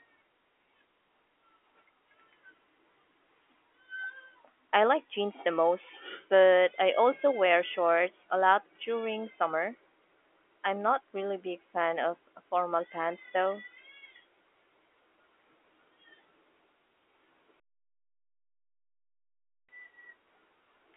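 No technical faults occur anywhere in the clip, so there is nothing to describe in time order.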